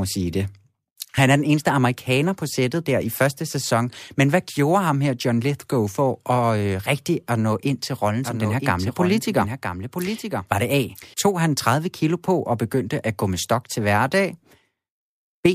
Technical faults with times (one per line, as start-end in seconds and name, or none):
8.24-11.14 doubled audio track